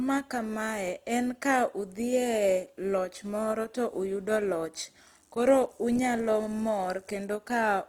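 From start to finish the speech has a rough, grainy texture, with the upper detail sounding noisy rather than clean. It's plainly audible throughout. That points to Opus compression, likely in its CELT music mode at a low bitrate, something around 24 kbps. The bandwidth stays full, but there aren't enough bits to code the fine detail, so bands get filled with noise or copies of lower ones. That's where the grit comes from.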